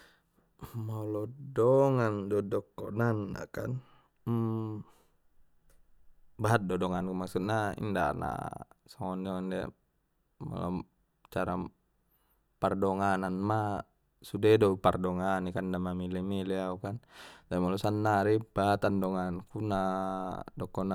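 A speech clip with a faint hiss and roughness riding on the louder, brighter sounds from 0 to 1.5 s, the mark of sample clock jitter: a converter clock wandering by a few microseconds leaves an error around 40 dB below the signal.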